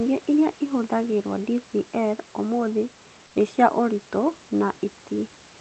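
At 3.27–3.35 s, before "nĩ cia ũritũ", 80 ms of featureless hiss about 2 dB quieter, likely comfort noise in place of the background, leaves a smooth, textureless spectrogram patch.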